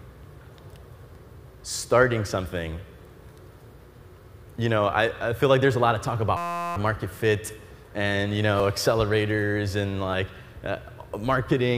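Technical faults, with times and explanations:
1.15 s, 2.45 s, 7.21 s, 8.60 s, 10.13 s: dropped buffer (overrun). Likely the program missed collecting samples before the hardware overwrote them, so about 20 ms goes missing each time (about 70 ms at 8.60 s), heard as a jump ahead.
6.37–6.76 s: system hang loop. The system froze while the hardware kept replaying one 5.8 ms piece, which fits a 256-sample buffer, so the same fragment repeats at 172 Hz as a steady buzz for about 0.4 s.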